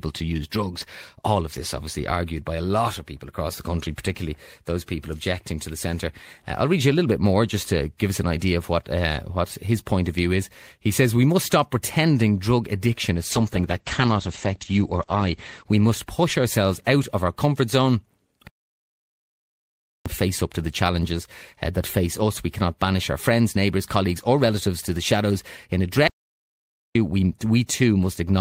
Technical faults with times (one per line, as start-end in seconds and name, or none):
13.32-16.31 call bitrate drop
18.47-20.06 playback stall
26.07-26.95 playback stall